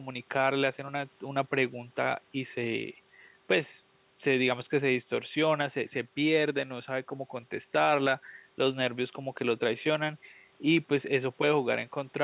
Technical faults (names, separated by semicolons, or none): none